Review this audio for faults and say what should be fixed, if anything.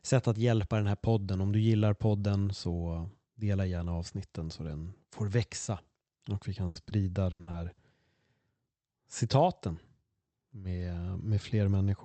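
Burst of packet loss occurs at 6.67–6.77 s and again at 7.31–7.49 s, where two bursts run back to back (7.31–7.41 s and 7.41–7.49 s). In each, the receiver extends the last sound for 60 to 80 ms and lets it fade, heard as a held buzz or a decaying hiss, and the speech then picks up further on with that stretch skipped. Unlike the short losses, these gaps are long enough to hear as a frozen, dying tone with content lost. Prevention: give the jitter buffer more headroom and add forward error correction and retransmission so consecutive packets are not all lost.

Short concealed packet loss appears at 6.89–6.93 s and 7.51–7.55 s. Each time, about 20 ms never arrived in time, so the decoder synthesised a continuation from the preceding sound and cross-faded back into the real signal. The result is a brief smear or wobble rather than a held, fading tone, and any short consonant there may simply drop out. 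These land right beside the bursts. Prevention: enable in-band FEC in the codec so isolated single losses can be rebuilt rather than guessed.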